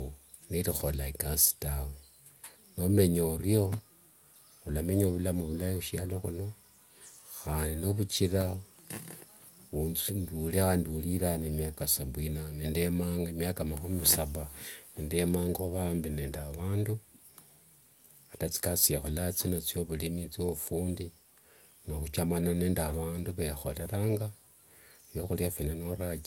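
A speech clip with generation loss all the way through: a swirly, hollow smear with blurred consonant attacks and nothing above 17.5 kHz. That's likely from around seven rounds of lossy re-encoding, each piling fresh quantisation noise onto the last, consistent with MP2 at 128 kbit/s.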